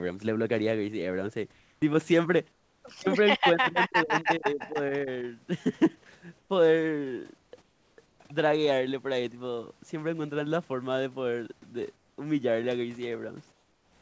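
Between the speech, the real room background is swapped for a steady, featureless hiss at 1.52–1.82 s, 2.52–2.84 s, 6.38–6.50 s, 7.38–7.52 s, 7.62–7.98 s, 8.06–8.20 s, 11.96–12.18 s, and from 13.52 s to the end. This is comfort noise in place of the background. It likely comes from discontinuous transmission, where the receiver fills the pauses with synthetic noise. The background here sits about 38 to 42 dB below the loud parts, and each patch is about 2 to 6 dB quieter than the genuine background. A noise gate would leave true silence. Here the gaps stay filled, but they lose all texture and jump in level at each edge.

From 3.37 to 4.77 s the speech dips in pieces, with roughly 0.7 s affected in total and the deepest drop around 30 dB. This is speech suppressed in double talk: the echo canceller likely could not tell the talker from the far-end loudspeaker echo and turned both down. 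Packet loss leaves abrupt holes or smeared repeats. These dips instead are fluctuating attenuation that follows the overlap.

Inside that stretch, at 4.5–4.7 s, a faint delayed copy of the voice appears 266 ms behind the original and roughly 20 dB down. This is an echo leak, likely residue the loudspeaker side's canceller failed to remove from its microphone pickup. Room reverberation would be a smooth tail joined to the sound. This is a distinct, late repeat.

Nothing is heard above 8 kHz, which fits the wideband call codec on this path.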